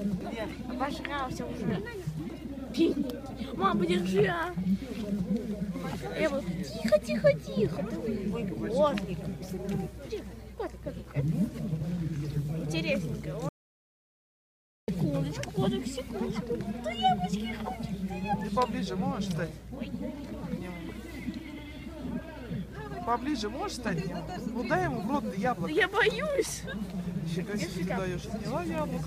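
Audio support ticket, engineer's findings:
Audio dropout to silence, 13.49 to 14.88 s: sound cuts off mid-flow and returns mid-flow after 1.39 s of silence, no room tone. Input likely lost upstream (device disconnect, link failure or mute) while the recorder kept writing silence. Unlike a gate or fade, no ramp and no residual noise floor. Content in the gap is unrecoverable.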